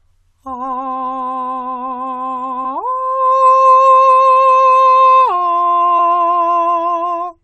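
In this music, damaged data in a compressed stream causes brief glitches at 2.64 to 2.66 s and 5.98 s, where the decoder misreads corrupted frames and loses sync.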